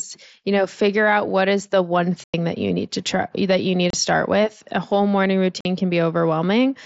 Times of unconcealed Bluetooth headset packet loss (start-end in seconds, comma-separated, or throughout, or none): 2.25-2.34, 3.90-3.94, 5.61-5.65